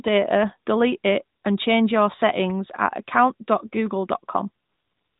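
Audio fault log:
1.38–1.44 s and 4.64–5.19 s, AMR comfort noise: after "delete it" and before "and change your settings", then through the clip's end, the phone stopped sending speech frames. The decoder filled in synthetic hiss, seen as flat, featureless spectrogram texture and a steady, even waveform envelope, all capped below 4 kHz by the narrowband coding.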